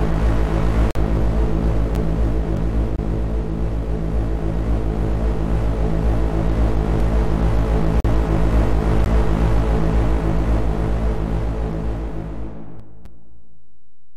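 Segment timestamps that don't quite meet leave gaps between stream segments, which the player fills with hard-edged silence at 0.91 s (45 ms), 1.95 s (10 ms) and 2.96 s (24 ms), roughly on the 1-second segment boundaries. Between those, at 2.57 s, overlapping chunks start each 6-second chunk before the last one ends, so about 23 ms plays twice as a short stutter. More gaps follow at 7.0 s (3 ms), 8.0 s (43 ms) and 9.04 s (16 ms), with a second overlap stutter at 8.66 s. At 12.80 s the sound and the background noise drop together by about 5 dB and stay lower to the end, a sudden gain jump likely caused by a digital gain change applied without a ramp. A final gap at 13.05 s (7 ms) interrupts this quieter stretch.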